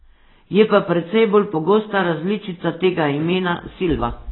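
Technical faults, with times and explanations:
Throughout, AAC compression, and a heavy dose of it: this speech has nothing above 4 kHz, so it sounds dull and boxed in, with the sibilants smeared into a fizzy, warbling hiss. That's the likely result of an AAC-LC encoder starved of bits, cutting away the top band and leaving gaps in the spectrum it can't afford to fill. The degree of damage fits a bitrate around 16 kbps.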